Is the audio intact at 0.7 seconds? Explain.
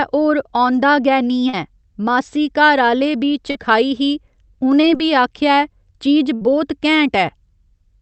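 Yes, at 0.7 seconds the speech comes through intact, with no dropout, glitch or distortion at that moment.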